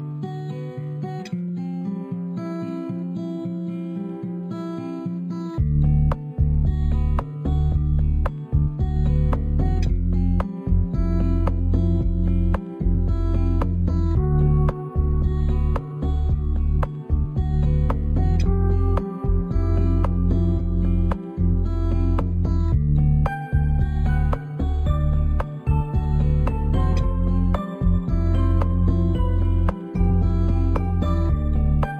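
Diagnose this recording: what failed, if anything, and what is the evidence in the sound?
Dull top end with a faint metallic shimmer throughout: imaging from linear upsampling in sample-rate conversion, 11 kHz to 44.1 kHz, with weak mirror images at 5.5–11 kHz.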